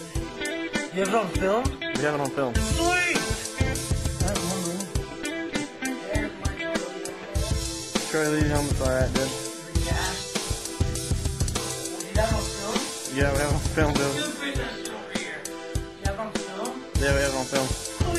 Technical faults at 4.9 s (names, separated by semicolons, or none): none